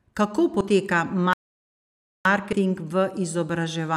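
At 0.60 s the speech jumps forward by about 50 ms, which fits a couple of 24 ms compressed frames skipped, either missing from the stream or rejected by the decoder as damaged. On a waveform the envelope shows a slight discontinuity. A spectrogram shows a brief vertical smudge where the harmonics jump. The same thing happens at 2.52 s with a larger skip of roughly 100 ms, around five frames.

From 1.33 s to 2.25 s the speech stops dead for about 0.92 s and then picks up again. This is a playback stall, likely caused by the player running short of data or its output thread being blocked until it recovered. The waveform shows a flat line across that span. The spectrogram shows an empty column, with energy ending abruptly on one side and resuming on the other.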